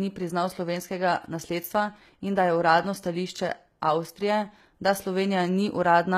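HE-AAC compression runs through the whole clip. The speech's upper band sounds synthesised rather than captured, likely from spectral band replication copying lower bands upward under a coarse envelope, which fits a bitrate near 20 kbps. Sibilants come out gritty and lispy throughout.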